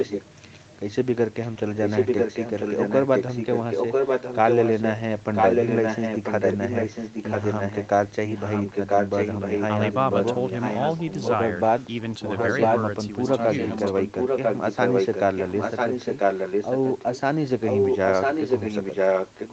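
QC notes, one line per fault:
0–0.59 s, 1.42–4.88 s, 5.34–7.89 s, 8.26–11.35 s, 12.23–12.79 s, 13.26–17.21 s, 17.62–19.53 s: echo leak. A second copy of the speech trails the original by 995 ms, close to its level and at times slightly quieter, so the two overlap. This is likely a loudspeaker on the far end feeding its microphone, with an echo canceller that failed to suppress the return path and sent that delayed pickup back into the call.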